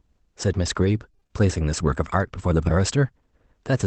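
From 1.11 to 1.31 s the speech turns choppy: repeated packet loss (robotic sound). Within that 0.2 s stretch there seem to be five short holes, the longest about 23 ms, and roughly half the span is covered by the decoder stretching the last received sound forward. Because each patch is followed quickly by another loss, the concealment never settles, giving a choppy texture with small pieces of the signal missing.

At 2.61 to 2.71 s a lost packet is rebuilt from error correction. The pattern fits three separate lost packets, each recovered from the low-bitrate copy that Opus in-band forward error correction carries in the following packet, so about 60 ms is reconstructed with no audible gap. Those frames sound rougher and noisier than their surroundings. The call path's audio band already stops near 8 kHz, so there is no extra high-frequency dip from the rebuilt frames.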